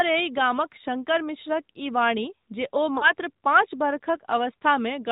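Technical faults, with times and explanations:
Throughout: AMR narrowband mobile codec. The speech is band-limited to 4 kHz and sounds noticeably buzzy and synthetic, which fits a mid-rate setting around 10.2 kbps.
2.98 to 3.13 s: lost AMR speech frames. About 40 ms of audio dropped out, so the decoder stretched the last good sound with fading level before the speech returned briefly rough.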